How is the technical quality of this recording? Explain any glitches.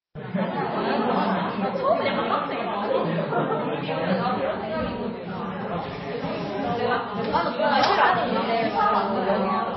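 The quality is poor, with plainly audible compression damage running through the whole recording. The treble ends abruptly at 5.8 kHz, and the sound has a watery, swirly texture with smeared attacks. This is most likely MP3 compression at a low bitrate, roughly 24 kbps. Short of bits, the encoder discards everything above a fixed cutoff and zeroes weak frequency lines frame by frame. On a spectrogram this shows as a flat ceiling at 5.8 kHz and flickering, patchy holes below it. In the waveform, transients look softened and pre-smeared.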